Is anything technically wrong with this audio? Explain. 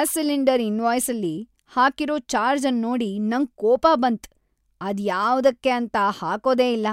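No, nothing technically wrong stood out on listening to this speech recording.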